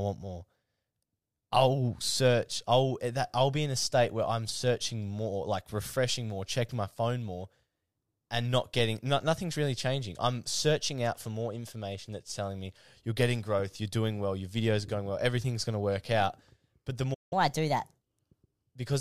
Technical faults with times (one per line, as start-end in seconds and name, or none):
17.14-17.33 playback stall
17.33-18.03 catch-up at higher speed